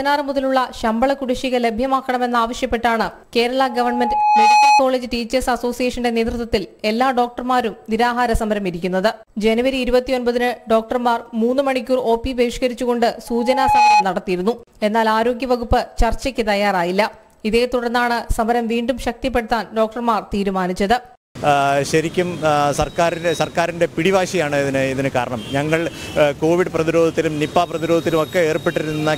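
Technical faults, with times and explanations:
3.58–4.82 s and 13.27–14.05 s, loudspeaker feedback squeal: a steady 839 Hz tone rises out of the sound and peaks roughly 5 dB above it, swelling over about a second the first time and about half a second the second time. The microphone is picking up its own loudspeaker, and at 839 Hz the loop gain exceeds unity, so that frequency keeps reinforcing itself until the loop is broken.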